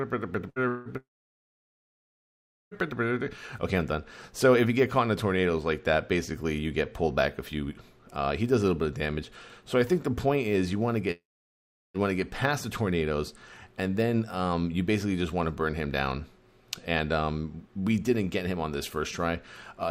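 At 0.49 s the sound briefly smears: the last moment is held and fades for about 65 ms, then playback jumps ahead with roughly 60 ms gone. This is a burst of packet loss. A short run of packets never arrived in time, so the receiver extended and faded what it had, then resumed at the next packet that did arrive, leaving that stretch missing.

A longer version of the same effect follows at 0.68 to 0.88 s. The fading tail lasts about 175 ms and never reaches silence, and about 180 ms is missing. From 0.97 to 2.74 s a short fading tail gives way to about 1.7 s of silence, with about 1.74 s lost. From 11.11 to 11.97 s the tail fades into about 0.74 s of silence, with roughly 840 ms skipped. Each of these is likely a long network dropout: the stream stopped arriving, concealment faded out, and the audio resumed further on without the lost portion.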